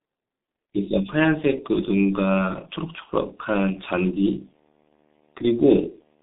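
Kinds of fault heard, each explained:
G.723.1 codec, throughout: the speech passes through a low-rate telephony coder, which fits a roughly 6 kbit/s coder working in 30 ms frames. Sound is held to about 200 Hz to 3.7 kHz with nothing above 3.8 kHz, and heavy coding damage leaves it muffled and hoarse with smeared consonants.
Video or display buzz, from 1.63 s to the end: a screen or video cable leaks into the audio path, adding a 75 Hz buzz at the display's field rate with hash above it. It sits faint, well below the speech, once it begins.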